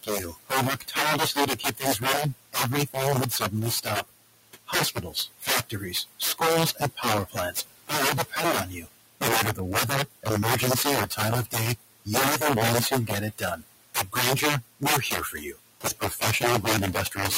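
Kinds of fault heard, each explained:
Integer overflow: loud speech peaks drive about 9 dB past full scale and wrap to the opposite sign instead of limiting, producing sharp, violent cracks throughout.
Noise suppressor artifacts: the suppressor pushes the room noise down by about 19 dB between phrases, then lets it rise under speech.
Speech cut by the noise suppressor: parts of the speech are treated as noise and pulled down by up to about 21 dB, so they sound swallowed or faint.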